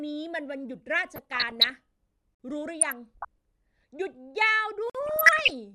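From 1.16 to 1.70 s the speech burbles. This is DAB burbling. Weak reception lets bit errors through the error correction, with an error rate below one percent. Corrupted sub-band data jumps in level for single frames. At 2.35 s a hole of 50 ms opens. This is a gap between chunks. Silence was left at the join between 2.5-second chunks. The burbling returns from 2.81 to 3.25 s. The gap repeats at 4.90 s, one chunk later. The last burbling runs from 5.06 to 5.55 s.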